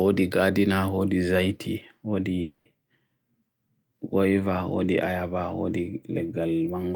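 A long network dropout runs from 2.41 to 2.67 s. The last sound is stretched into a fading buzz for about 240 ms and never falls to silence. The speech then resumes with roughly a quarter-second missing, likely because packets stopped arriving and the receiver filled the gap.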